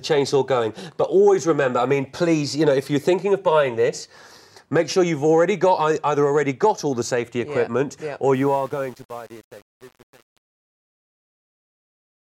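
From 8.34 s to the end, the fade-out turns gritty and grainy, worst from about 8.39 s to 12.27 s. This is truncation distortion on a fade: the undithered fade stage rounds the sinking level to coarse steps, which fits a 7-bit path. The fade's distortion runs from about 8.3 s to 12.3 s.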